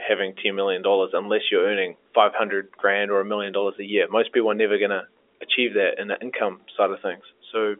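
No technical faults can be heard in the speech. It carries the sound of G.711 telephone coding, with a band running from about 300 Hz to 3.5 kHz, nothing above 3.7 kHz, and at most a faint grain from the coding.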